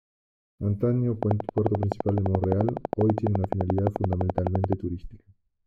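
From 1.23 s to 4.74 s a train of clicks runs over the sound, regularly spaced at 11.7 per second, about forty in all, peaking roughly 20 dB above the signal. The matching pulses are likely interference from nearby equipment, heard as steady ticking, including in pauses.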